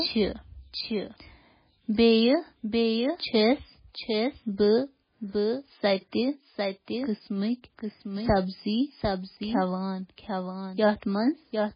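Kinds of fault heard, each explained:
Doubled audio track: The whole clip carries a second copy of the same speech trailing about 0.7 s behind and roughly 5 dB quieter, so every phrase gets a clear, flat echo that sits right on top of the next bit of talking. It's full-band with no decay or room colour, so it isn't a reflection. It's likely a second capture path running slow, or an edit that left two copies out of step.
MP3 compression: Everything above 5 kHz is simply gone, a hard ceiling that makes the speech sound dull and boxed-in, and the damage is heavy throughout. The encoder is starving for bits, which fits a very low bitrate around 16 kbps. It throws away weak frequency lines that flicker in and out from frame to frame, giving a watery, swirly texture with chirpy s sounds and smeared consonant attacks, most likely from MP3 encoding.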